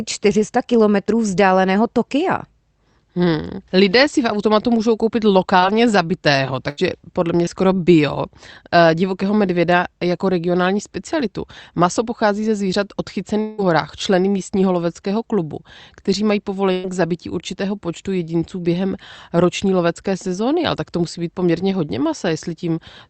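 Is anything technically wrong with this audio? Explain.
Yes. This speech clip has several packet-loss faults, heard through a call path whose top end stops around 8 kHz, consistent with Opus at roughly 40 kbps.

Short concealed packet loss occurs twice: at 5.59 to 5.64 s, right after "v automatu můžou koupit", and at 7.45 to 7.49 s. Each time about 20 ms of audio failed to arrive. The decoder bridged the hole by extrapolating the preceding sound, pitch-following if voiced and shaped noise if not, then crossfaded back. The result is a brief smear or wobble, and a short consonant may drop out.

Burst of packet loss occurs at 6.70 to 6.79 s, ending just before "podle mě skoro bio", and at 16.72 to 16.87 s. About 80 ms and 120 ms of audio are missing, respectively. In both, the receiver stretched the last received sound and attenuated it across the gap, giving a held buzz or a decaying hiss, and the audio then resumes further on with the intervening content gone.

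Long network dropout runs from 13.41 to 13.60 s, between "pochází ze zvířat" and "horách členy místního loveckého". Roughly 180 ms of signal is absent, likely because nothing arrived from the network for that stretch. The gap is filled almost entirely by a concealment tail that fades rather than reaching silence. Speech picks up again afterward with the lost portion simply missing.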